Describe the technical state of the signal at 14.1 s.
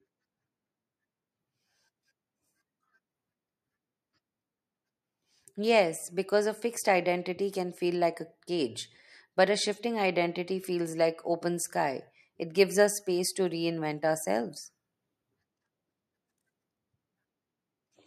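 At 14.1 s the speech signal is intact, with no dropout, clipping, distortion or other fault to be heard at that point.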